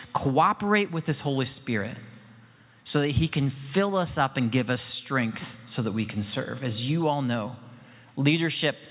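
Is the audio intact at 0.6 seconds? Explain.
Yes, the audio is intact at 0.6 seconds, with no dropout, click, distortion or other fault at that moment.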